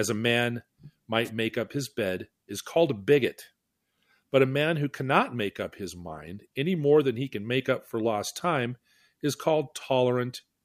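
At 1.24 s, running to 1.29 s, a wireless microphone noise hit cuts across the speech just before "make up his bed". For about 50 ms the radio link from the analogue FM microphone fades as reflected signals cancel the direct one, so the receiver's own noise rises. It is heard as a brief swish of static.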